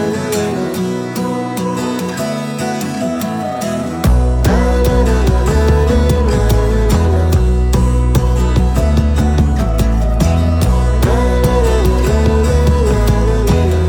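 Nothing in this clip calls for comment, as no technical faults turn up anywhere in it.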